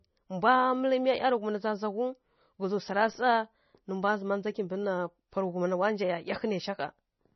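From start to finish the speech is dull, with nothing above about 5.9 kHz, so the s sounds lose their edge. There's a watery, swirly texture over everything, and consonant attacks smear rather than snap. That's likely heavy MP3 compression, and the damage points to a very low bitrate, around 24 kbps. Starved of bits, the encoder chops the treble at a fixed point and drops weak frequency lines that flicker on and off between frames.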